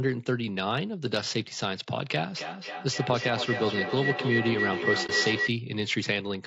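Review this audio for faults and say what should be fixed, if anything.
Throughout the speech there is plainly audible coding damage: a rough, grainy texture with noise filling the gaps between pitch harmonics and a thin, artificial-sounding top band. The likely cause is low-delay AAC compression, consistent with AAC-ELD at a low bitrate of around 32 kbps. Its short frames cannot separate closely spaced harmonics well, so at this rate the encoder runs short of bits and smears the spectrum. Prevention: raise the call bitrate or switch to a codec mode with longer frames where latency allows.

From 2.37 s to 5.57 s a feedback howl builds up around 2 kHz and reaches roughly the same level as the speech. Its repeats come about every third of a second, which is the round-trip delay of a loop from microphone to loudspeaker and back through a second device in the same room. Each pass adds gain, so the tone grows rather than decays and narrows onto the frequency the loop favours. 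Prevention: mute or remove the second device in the room, or use headphones on one end.

At 5.06 to 5.11 s, during the howl, the sound fades out and back in, leaving a brief dip. The missing audio is about 30 ms, which fits a single lost AAC frame. This is AAC frame loss with muting: the decoder zeroed that frame's spectrum, and the overlapping windows of the neighbouring frames tapered the edges. Prevention: improve network reliability or enable forward error correction and packet-loss concealment on the link.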